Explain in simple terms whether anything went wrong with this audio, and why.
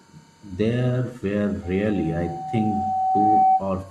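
Loudspeaker feedback squeal runs from about 1.63 to 3.65 seconds. A steady tone near 756 Hz appears and swells over about two seconds until it is much louder than the speech. This happens when a microphone picks up the loudspeaker it is feeding. The sound loops round and round, and at one pitch each pass comes back louder than the last, so that single tone grows on its own into a howl.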